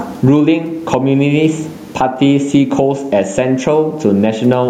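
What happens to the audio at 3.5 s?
At 3.5 s the gain pumping heard throughout the speech continues: the gain swings by around 15 dB, pulling down under each loud sound and squashing loud and soft parts closer in level, likely from excessive gain and a fast limiter.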